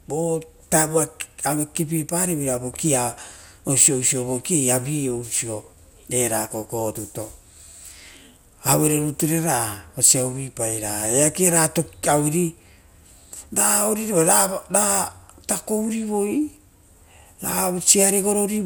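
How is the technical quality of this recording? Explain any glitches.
The quality's noticeably degraded, with one fault running the whole way through the speech. Generation loss: it sounds swirly, smeared and hollow, with soft, blurred attacks and nothing above 20.6 kHz. The likely cause is repeated lossy re-encoding, around seven passes through something like MP2 at 128 kbit/s, each on a shifted frame grid, so the quantisation noise keeps piling up.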